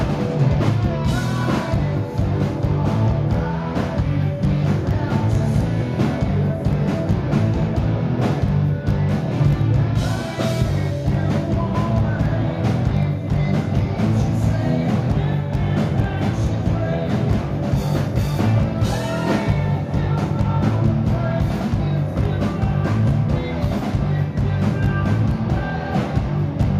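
No technical faults can be heard in this audio.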